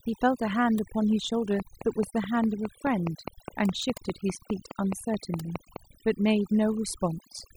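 Overdone noise removal runs throughout: an overly strong reducer cuts frequency bands near its noise estimate, leaving near-silent twinkling gaps. A train of clicks from 1.6 to 5.77 s, regular at 4.8 per second, about twenty clicks, peaks about 15 dB above the speech, likely from electrical interference or a faulty connection.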